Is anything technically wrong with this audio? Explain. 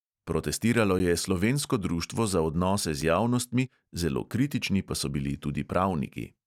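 Yes. The speech has two blocks of digital silence, at 0.99 s and 3.01 s, lasting 10 ms and about 5.5 ms. At each point the signal drops straight to zero and then resumes with no fade, so both edges of each gap are hard discontinuities. That happens when the output buffer isn't filled in time and zeros go out instead. Because the gaps are so short, each one is heard as a tick or dip rather than an audible hole in the speech.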